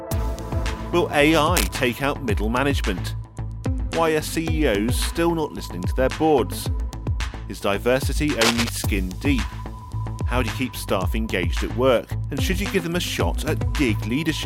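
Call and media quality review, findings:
Cable scratch noise at 1.55–1.73 s, about 5 dB under the signal, and 8.41–8.69 s, roughly level with it. Dense rustling bursts, likely a worn cable or connector whose contact resistance is fluctuating.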